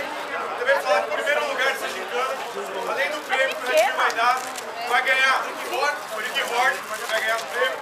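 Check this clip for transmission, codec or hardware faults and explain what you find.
No transmission, codec or hardware faults are audible anywhere in the clip.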